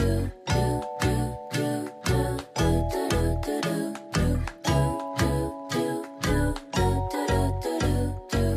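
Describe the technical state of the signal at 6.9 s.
At 6.9 s the signal is intact, with no dropout, click, distortion or other fault at that point.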